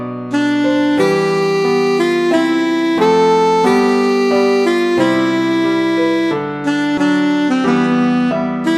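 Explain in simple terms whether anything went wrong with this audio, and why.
Nothing went wrong here: the audio runs without any dropouts, glitches, distortion or other technical faults anywhere in the clip.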